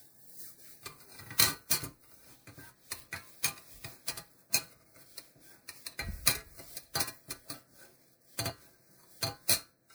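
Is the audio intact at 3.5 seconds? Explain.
No. At 3.5 seconds, as throughout the clip, the sound is swirly, smeared and hollow, with blurred attacks. This is generation loss, likely from about four rounds of MP3 coding at what sounds like 128 kbit/s, each pass adding fresh quantisation noise and spectral holes.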